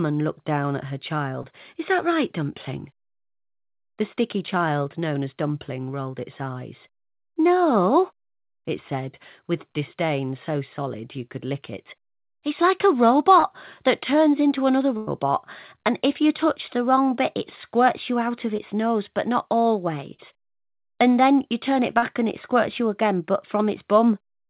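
Around 1.42 to 1.46 s there's the first short concealed packet loss: roughly 20 ms of audio didn't arrive in time, so the receiver patched the hole by extending the previous sound and then blended back in. It comes across as a tiny smear. The same thing happens at 13.40 to 13.45 s, where about 40 ms went missing and the patch comes across as a brief wobble.

Then at 14.97 to 15.09 s there's a proper burst of packet loss, with about 100 ms gone. The concealment keeps extending the last sound and fades it as the gap goes on, so you get a held buzz or a dying hiss. When the real audio picks up again, that stretch is simply missing.

Another short concealed packet loss at 18.57 to 18.60 s, with about 12 ms filled in, is just a brief smear. At 20.14 to 20.20 s a second, smaller burst of packet loss drops about 40 ms, and you hear the same brief fading fill followed by a small jump forward. The last short concealed packet loss, at 21.98 to 22.04 s, covers about 40 ms and gives another short smear. 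Under all of this, nothing above 4 kHz gets through, which fits a narrowband call codec like G.711 A-law.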